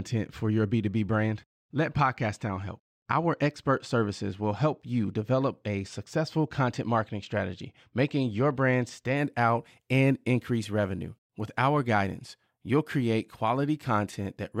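From the start to 9.17 s, channel delay (comb filtering) gives a dull top: one channel lags by a couple of samples. Unlike a low-pass roll-off, it leaves a fixed notch near 10 kHz when summed.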